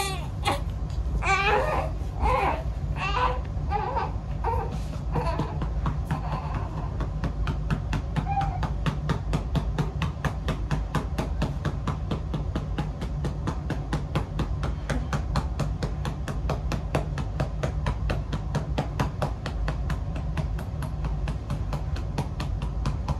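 No technical faults can be heard in the audio, so there is nothing to describe in time order.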